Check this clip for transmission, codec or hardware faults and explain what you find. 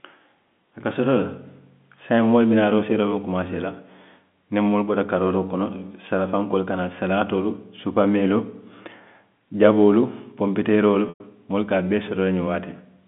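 There's one transmission fault, a packet loss with pitch repetition, heard over telephone-band G.711 speech. At 11.09 to 11.20 s, right after "jaboolu ponpiteeroolu" and before "moolu ka", about 110 ms of audio goes missing, which fits roughly eleven 10 ms packets. The receiver fills the hole by looping the last pitch period, so you get a brief held, buzzy tone fading out over about 50 ms, then a short silence, and the speech cross-fades back in.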